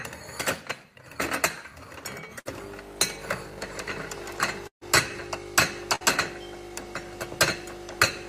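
Sounds with bursts of packet loss at 2.39–2.47, 4.67–4.83 and 5.95–6.03 s. The spectrogram shows the last sound smeared and fading, then an abrupt jump, and the middle gap drops to near-silence for about 100 ms.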